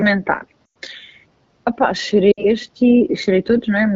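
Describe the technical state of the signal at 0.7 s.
Lost AMR speech frames run from 0.66 to 0.77 s, a gap of about a tenth of a second. The wideband decoder received frames that failed their checksum and, lacking valid data, repeated the last good pitch and vocal tract parameters while ramping the gain down. At 0.7 s the speech has dropped to near silence, then returns briefly weak and rough as fresh frames resume. The HD Voice coding at 12.65 kbit/s is audible as light codec colouring.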